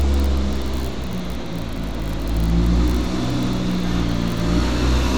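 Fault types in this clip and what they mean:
There are no fault types in this clip.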